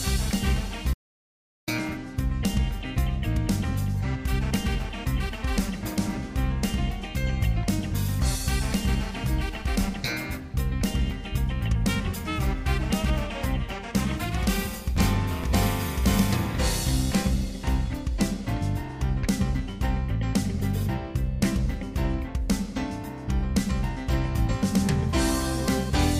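Right near the start, from 0.94 to 1.68 s, there's an audio dropout to silence: the sound cuts out mid-flow for about 740 ms to plain silence, no room tone at all, then snaps back. Likely the input was lost briefly while recording carried on.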